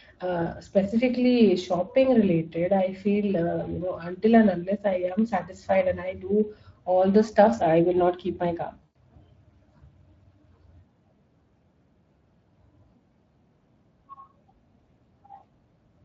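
From the start, the whole clip carries Speex codec damage: the speech sounds hoarse and grainy, with a noisy edge, because this CELP coder has too few bits to rebuild the excitation cleanly. The degradation is plainly audible and fits a bitrate of around 20 kbps.

Then at 8.83 s there's a dropout with VoIP packet loss concealed by the speech codec, running to about 8.97 s. About 120 ms of audio went missing, which fits six 20 ms frames. The decoder keeps extending the last pitch and filter, so the sound is stretched out and fades.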